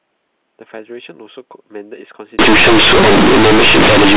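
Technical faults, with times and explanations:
2.39 to 4.17 s, companded audio read as linear: A-law bytes play as plain 8-bit samples without expansion, so quiet sound swings as wide as loud, giving loud buzzy distortion.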